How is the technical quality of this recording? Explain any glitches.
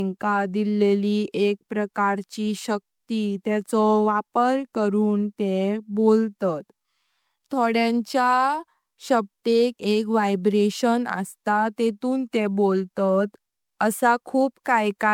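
The recording's technical quality is degraded throughout by generation loss. The speech was likely decoded and re-encoded about four times with a lossy codec; the character points to MP3 at around 128 kbit/s. Each pass requantised the audio on a shifted frame grid, so the noise and missing spectral bands from every round stacked up. The result is swirly and hollow, with a smeared quality heavier than that bitrate alone would produce, and consonant attacks sound blurred rather than crisp.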